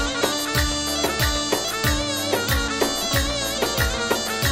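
No technical faults can be heard anywhere in the audio.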